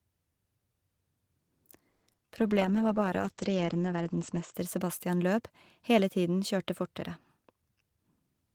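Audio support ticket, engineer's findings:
Call audio freeze at 1.89–2.04 s: the sound holds and smears into a fading buzz for about 130 ms, then picks up right where it left off with nothing lost. Likely packets stalled in transit and the jitter buffer ran dry, so the receiver stretched the last sound. That adds 130 ms of delay.

Short concealed packet loss at 2.12–2.15 s and again at 2.17–2.20 s: two brief smears. Roughly 20 ms and then 40 ms of audio never reached the decoder, and the receiver papered over each hole by extending the previous sound before blending back. Delay drops by roughly 30 ms after the second.

Jitter buffer slow-down at 2.27–2.55 s: speech drags to 88% speed while the pitch stays put, so sounds get drawn out. The buffer was rebuilding its reserve by repeating single pitch periods, about 40 ms in total, right after the stall and losses above.

Call bitrate drop at 2.38–4.60 s: the speech goes rough, watery and muffled. 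The bandwidth estimate crashed and the encoder fell from 32 to 10 kbps, sitting at the floor for about 2 s. At that rate Opus cuts the top end from 20 kHz down to 8 kHz, hence the dull sound until it recovers.

Jitter buffer speed-up at 7.48–8.35 s: speech runs hurried at 114% speed with unchanged pitch. The buffer was holding more than its target, so the receiver trimmed short pitch-period chunks, roughly 150 ms overall, to pull the latency back down.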